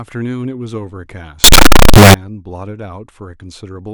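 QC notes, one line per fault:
1.44–2.14 s, signed and unsigned mixed up: for about 0.7 s the speech turns into a blast of loud, harsh distortion, with the quiet moments as loud as the rest. The likely cause is samples read with the wrong sign convention, which fits 16-bit audio, so the top bit is flipped. Every small swing across zero becomes a leap from one extreme of the range to the other, burying the signal in harsh distortion.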